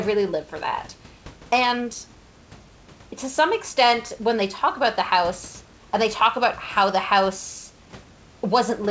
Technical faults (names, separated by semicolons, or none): none